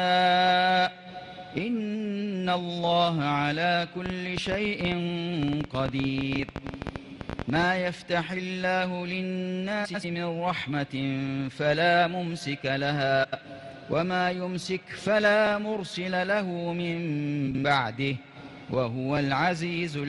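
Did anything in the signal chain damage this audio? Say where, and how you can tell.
Yes. A train of clicks from 4.06 to 7.64 s, likely interference on analogue wiring or a struggling interface, injects roughly fifty irregular ticks, about 12.6 per second, peaking about 15 dB above the sound.

Frames out of order at 6.34, 9.84, 13.23 and 17.47 s, from network or codec reordering, swap adjacent blocks of 42.1 ms (the first) or 92.9 ms, producing garbled flutters.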